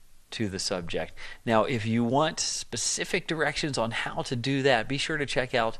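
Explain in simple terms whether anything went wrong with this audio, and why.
Something did go wrong, and it lasts for the whole clip: the sound is dull and carries a gurgling, grainy distortion, the kind of damage that points to MP2 compression. This format likely came from too tight a data budget. It divides the sound into narrow frequency slices and shares out a limited number of bits among them. Upper slices get switched off, which removes the brightness, and the remaining slices are stored so roughly that they gurgle.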